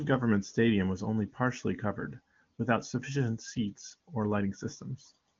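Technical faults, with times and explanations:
No technical faults are audible.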